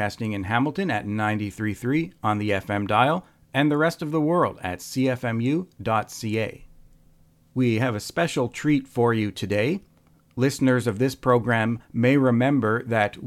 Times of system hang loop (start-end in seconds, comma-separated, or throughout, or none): none